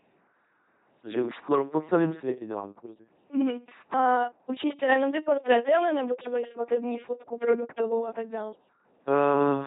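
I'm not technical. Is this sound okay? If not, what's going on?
No. The speech has been passed through an LPC-10 vocoder for its whole length, a very low-rate system that rebuilds the voice from a simple buzz or hiss shaped by a rough model of the throat. Every instant is treated as either fully buzzed or fully hissed, so the voice comes out flat, buzzing and robotic, with stray buzzes or hiss where that choice goes wrong. Nothing remains above about 3.8 kHz, so it also sounds muffled.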